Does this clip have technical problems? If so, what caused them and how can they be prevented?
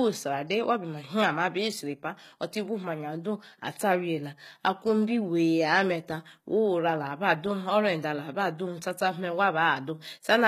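Yes. Throughout the speech, s sounds turn gritty and lispy while the treble stays bright, most likely from HE-AAC compression rebuilding the top band from copied lower harmonics. The sound fits a very low bitrate around 20 kbps. Unlike a plain low-pass, which dulls the highs, the treble is present but synthetic. Encoding at a higher bitrate with ordinary AAC would prevent it.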